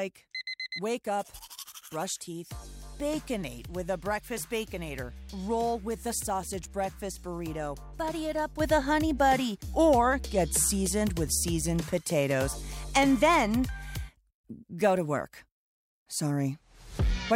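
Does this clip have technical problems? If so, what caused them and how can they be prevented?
Yes. A sudden gain jump occurs at 8.6 s and lasts to the end. The sound and its background noise rise together by about 7 dB in one step. This is likely a gain setting applied instantly, without a ramp. Prevent it by smoothing every gain change over several milliseconds.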